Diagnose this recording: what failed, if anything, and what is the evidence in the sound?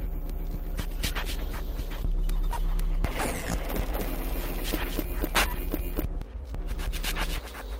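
A call bitrate drop, at the codec stage, runs from 0.72 s to 3.93 s. The sound turns coarse and watery and loses its top end. The worst stretch lasts about 1.65 s before quality climbs back. The bandwidth estimate fell and the encoder was told to spend far fewer bits. The audible degradation fits a fall from roughly 64 kbps to 22 kbps, where Opus quantises more crudely and trims high frequencies.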